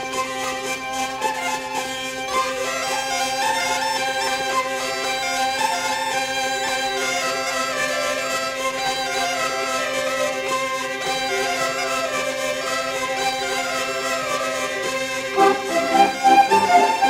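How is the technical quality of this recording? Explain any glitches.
The recording has one clear problem, a crude rate conversion that runs the whole way through. The sample rate was changed by simply repeating the nearest sample rather than filtering and interpolating properly, and the small ratio between the rates points to a 44.1 kHz to 48 kHz conversion. Those repeated samples leave a periodic error that sits only around 20 dB below the sound itself. You hear it as a gritty, inharmonic fizz riding on the louder and brighter moments.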